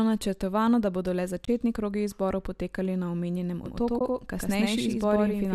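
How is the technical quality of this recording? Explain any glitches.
The recording has two short dropouts and a doubled track near the end. The light coding texture likely comes from low-delay AAC coding.

AAC frame loss with muting occurs twice. The first is at 1.45 to 1.48 s, right after "načrtovano da bodo le". The second is at 3.99 to 4.01 s, after "izborov potekali na omenjenem". Whole coded frames went missing, roughly 30 ms and then 20 ms. The decoder zeroed them. Overlapping windows fade the sound out and back in, so each is a soft-edged gap.

A doubled audio track starts at 3.66 s, after "izborov potekali na omenjenem", and runs to the end. A second copy trails by about a tenth of a second at roughly equal level. It likely comes from a second, slower capture path. It sounds like a dry, full-band echo that begins abruptly.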